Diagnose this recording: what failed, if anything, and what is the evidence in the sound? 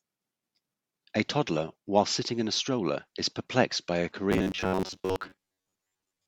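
The failure sits at the driver or buffer stage and shows up as robotic sound from repeated short buffers. Right after "is perplexed by a", from 4.32 s to the end of the clip, the speech collapses into a rigid metallic buzz near 94 Hz that only loosely tracks the words, with most of the stretch made of repeats. The likely cause is audio arriving too slowly, so the software loops a roughly 10.7 ms fragment, whose period fixes that pitch, while the real audio is skipped.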